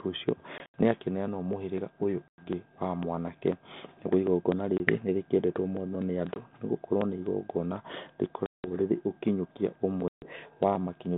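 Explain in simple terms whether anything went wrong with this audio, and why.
Something did go wrong: the speech has packet loss on an ADPCM call. Chunks of the signal never arrived and were filled with sudden silence, at 0.58–0.81, 2.29–2.46, 4.78–4.81, 6.34–6.44, 8.46–8.67 and 10.08–10.27 s. The gaps run from about 20 ms to 180 ms. The codec builds each sample as a guess plus a correction, so after a hole the receiver's guesses are off and the speech comes back briefly slightly distorted, at times at the wrong level or with a click, before settling.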